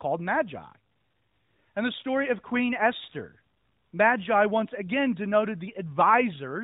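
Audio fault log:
No faults heard anywhere in this speech recording.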